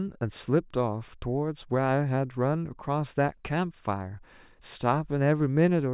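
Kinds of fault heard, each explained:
No technical faults are audible in this speech recording.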